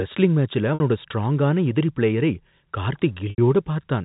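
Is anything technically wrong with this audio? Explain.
Yes, there's packet loss with pitch repetition twice: at 0.74 to 0.80 s, right after "ரெஸ்லிங் மேட்ச்ல" and before "ஸ்ட்ராங்கான எதிரி பிளேயரை", about 60 ms goes missing, and at 3.30 to 3.38 s about 80 ms drops. The receiver loops the last pitch period to fill each gap, so you hear a brief held, buzzy smear in the speech. The G.711 telephone band underneath is the usual narrow line sound.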